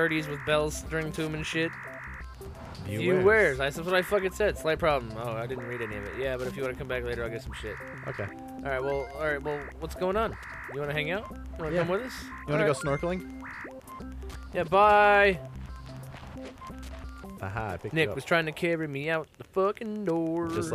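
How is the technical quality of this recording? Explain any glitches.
The recording has one fault, Wi-Fi interference, present throughout. A nearby Wi-Fi radio's beacon, sent every 102.4 ms, is rectified by the audio circuit, producing steady ticking about ten times a second, roughly 30 dB below the main sound.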